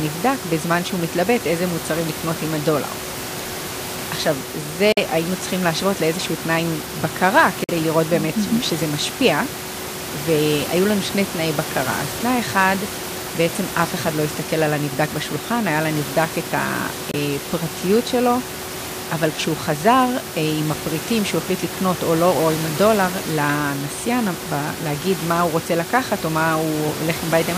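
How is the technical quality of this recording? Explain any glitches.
The speech has three short gaps in the playback, with room noise about 13 dB below the speech throughout.

Bluetooth dropout is the likely cause of the gaps at 4.92 to 4.98 s, 7.64 to 7.71 s, and 17.11 to 17.15 s. When audio packets fail to reach the headphones in time, they are discarded, and the output falls silent until good data arrives. The first two lose about 46 ms each, consistent with two missing packets, and the third loses about 23 ms, fitting one. After each gap the speech resumes further along, as though it had kept playing through the hole.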